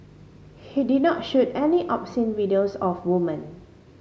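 No technical faults are audible anywhere in this recording.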